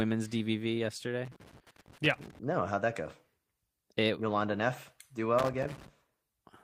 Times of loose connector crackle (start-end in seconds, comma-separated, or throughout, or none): 1.25-2.39, 5.39-5.88